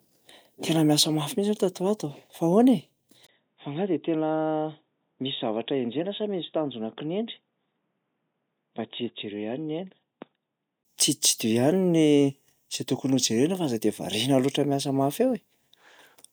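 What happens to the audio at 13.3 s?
Nothing goes wrong at 13.3 s: the speech carries on intact through that moment, with no dropout, click, distortion or other fault.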